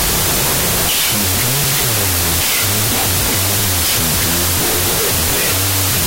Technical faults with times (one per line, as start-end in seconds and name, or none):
0.00-6.07 wrong sample width